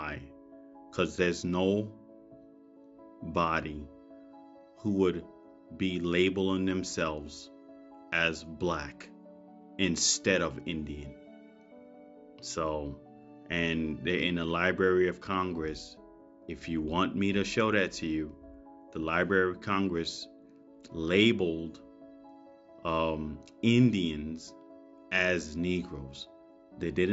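No technical faults can be heard anywhere in this audio. There is no event to mark at any point in the clip.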